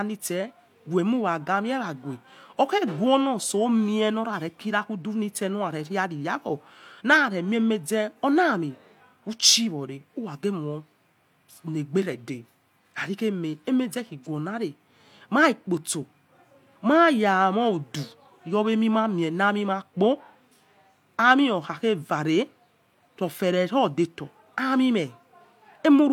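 No technical faults can be heard anywhere in the clip.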